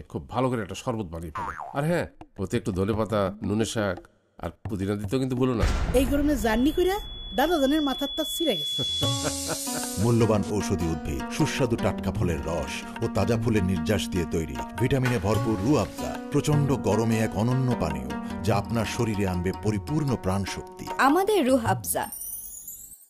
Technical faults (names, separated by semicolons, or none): loudspeaker feedback squeal